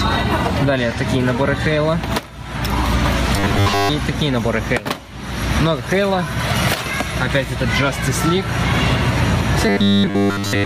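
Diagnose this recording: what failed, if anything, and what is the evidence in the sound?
The gain swings by about 20 dB, pulled down under each loud sound, flattening dynamics. This is gain pumping, likely from input gain set too high with a fast limiter catching it.

From 3.36 to 3.89 s and from 9.69 s to the end, the sound becomes a rigid 100 Hz metallic buzz. This is robotic sound from repeated short buffers, likely at the driver or buffer stage, looping roughly 10 ms blocks in place of most of the incoming audio.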